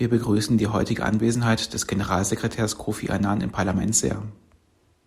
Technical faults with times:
none

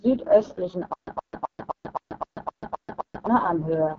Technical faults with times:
0.00-3.98 AMR wideband (HD Voice) codec
0.93-3.27 stutter with silent gaps

